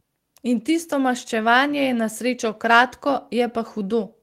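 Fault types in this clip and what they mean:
No technical faults can be heard anywhere in this speech clip. There is nothing in it to list under any fault type.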